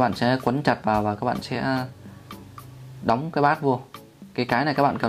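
No technical faults can be heard anywhere in this audio; there are no interruptions or disturbances in its level or timing.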